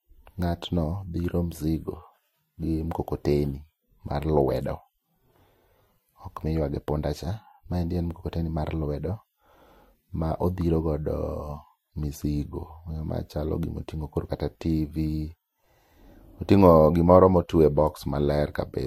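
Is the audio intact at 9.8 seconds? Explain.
No. At 9.8 seconds, as throughout the speech, the sound carries transcoding between lossy codecs, likely an MP3 pass followed by Vorbis at low bitrates. Coding artefacts from both stages are layered together, and nothing remains above 16.7 kHz.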